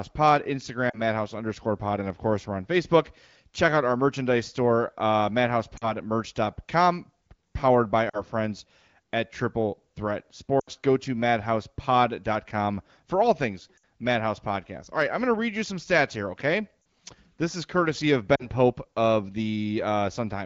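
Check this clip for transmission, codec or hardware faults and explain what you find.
The clip has seven short dropouts from lost AMR speech frames. The AMR wideband (HD Voice) coding underneath sounds clean, consistent with a rate near 15.85 kbit/s.

The dropouts fall at 0.89–1.01 s, 5.77–5.93 s (right after "our merchandise store uh"), 8.09–8.22 s (between "powered by" and "friends at"), 10.59–10.68 s, 13.77–13.81 s, 16.81–16.85 s (after "some stats here okay") and 18.35–18.47 s.

Radio errors corrupted the speech frames, so the decoder discarded them and reused the last good pitch and vocal tract settings at falling gain. Most gaps are about 40 ms, which fits two lost 20 ms frames. The longer ones, about 60 ms at 13.77 s and 80 ms at 10.59 s, point to runs of three and four frames. Each is heard as a brief smeared warble that dips toward silence, with speech resuming weak or rough for a moment.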